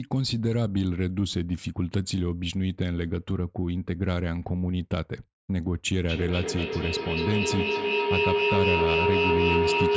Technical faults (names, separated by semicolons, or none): feedback howl